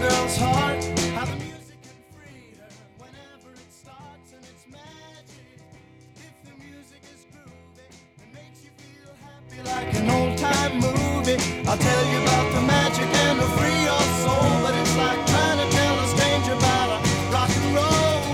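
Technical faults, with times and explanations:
1.14–1.71 s and 9.38–9.88 s, zipper noise: the level falls by about 25 dB, then later rises by about 25 dB, in 3 dB jumps around fifteen times a second rather than a continuous glide. Each jump clicks, so a ticking rasp rides on the fade, unlike a smoothly ramped fader move.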